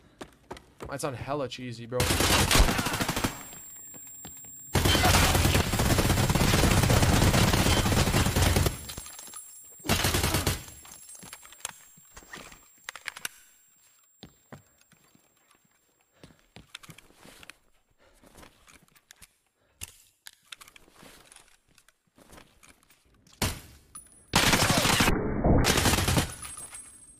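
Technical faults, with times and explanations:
8.98 to 9.01 s, loud pop: a single sharp thump rises roughly 5 dB above the surrounding sound, which carries on underneath without a gap. Unlike a dropout or glitch, nothing is lost. A brief voltage pulse, likely from a switch, plug or static discharge, was added to the signal.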